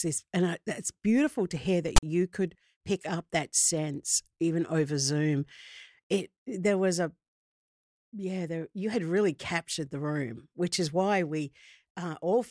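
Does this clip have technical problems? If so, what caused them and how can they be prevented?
Yes. Between 1.96 and 2.03 s, right after "beautiful to hear that" and before "you could pick up", file tags are played as audio. The player reads the metadata text as samples, which produces a harsh rasp pushed to one side. The tags' zero padding then drops to dead silence. On a waveform this appears as a hard-edged block offset from centre, followed by a flat line. A spectrogram shows a sharp broadband vertical band that ends abruptly in blank space.

To prevent it, make the decoder parse and skip tag blocks so that only the real sample data reaches playback.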